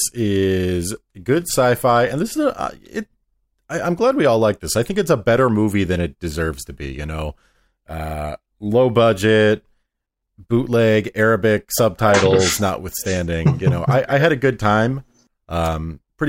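Nothing technically wrong turns up anywhere in this short stretch of speech, so there's no fault to point to and no cause to chase.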